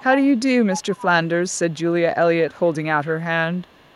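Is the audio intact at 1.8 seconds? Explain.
No. At 1.8 seconds the sound falls inside an echo leak running from 1.47 to 1.93 s: a very faint copy of the speech, delayed by 439 ms, sits far below the direct signal. This is likely residual loudspeaker pickup that the far end's echo canceller failed to remove.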